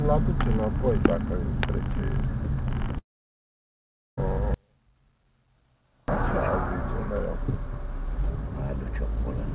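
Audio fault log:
2.98–4.19 s, long network dropout: about 1.2 s of audio goes missing, most likely because packets stopped arriving. The receiver stretches the last sound into a brief fading buzz or hiss, and then roughly 1.14 s of near-silence follows before the sound resumes with that stretch simply gone. On a waveform this looks like a short decaying tail and then a flat line. A spectrogram shows a smeared band that fades into an empty region, with an abrupt return.
4.54–6.08 s, audio dropout to a faint residue: the wanted signal cuts out abruptly for about 1.54 s, and only a faint remnant about 40 dB below normal level is left. The likely cause is a break upstream while the later path stayed live, which is why the gap holds residue rather than true silence. The waveform drops to a thin sliver with hard edges at both ends. A spectrogram shows a sharply bounded region of very low energy.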